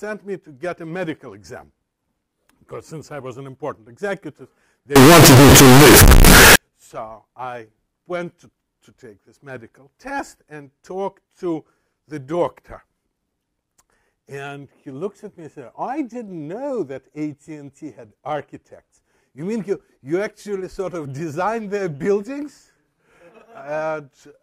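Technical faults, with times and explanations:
4.96 to 6.56 s, float read as integer: the audio abruptly becomes a harsh, nearly square waveform at an almost fixed, high level, with background noise as loud as the main sound. This is likely 32-bit float samples read as 32-bit integers, so sign and exponent bits dominate each value.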